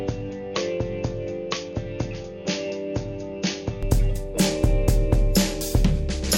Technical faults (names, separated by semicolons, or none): input switched to a poorer device